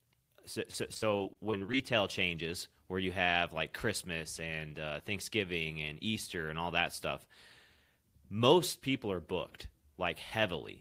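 Repeated packet loss (robotic sound) runs from 0.71 to 1.76 s. Over that second, roughly ten short holes open in the stream, the longest about 45 ms, adding up to around 220 ms of lost audio. The receiver covers each hole by stretching the sound it last had, so nearly a fifth of the span is patched-in filler. The speech turns choppy, with small pieces clipped out and a robotic edge until the losses stop.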